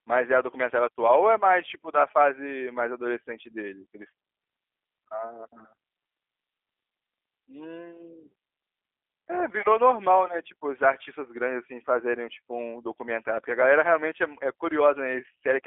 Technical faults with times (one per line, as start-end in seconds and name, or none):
0.00-15.66 G.729 codec